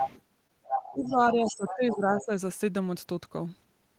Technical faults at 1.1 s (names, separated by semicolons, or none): other side's voice leaking through; speech suppressed in double talk